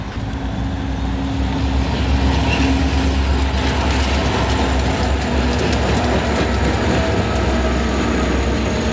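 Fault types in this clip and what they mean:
Sound dropped by the voice detector: From 0.12 to 0.16 s, 40 ms of sound gives way to steady noise, then returns. The likely cause is the sender's voice detector treating that stretch as background and pausing transmission, with comfort noise filled in at the receiver.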